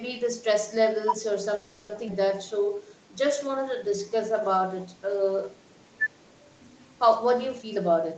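At 1.55 s the speech stalls into a call audio freeze lasting until 1.91 s: the last sound is stretched into a fading buzz or hiss for 340 ms, likely because packets were held up and the jitter buffer ran dry. Unlike a dropout, nothing is lost; the speech resumes exactly where it stopped, only later.

At 2.07 s a skip ahead does the opposite. Roughly a fifth of a second of speech is discarded, with only about 10 ms bridging the cut, so two moments that were never adjacent are spliced almost seamlessly. There is no pause, just a sudden jump.

From 2.47 s to 4.60 s a jitter buffer slow-down stretches the speech to 91% speed by repeating single pitch periods, adding 188 ms in total. The pitch stays put, which distinguishes this from a slowed recording. Sounds are drawn out.

From 7.58 s to 8.15 s a jitter buffer speed-up trims out tiny pitch-period slices, about a tenth of a second in total, pushing the speech to 117% speed. 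It sounds hurried but keeps its pitch, unlike a skip ahead, where a single chunk vanishes at once.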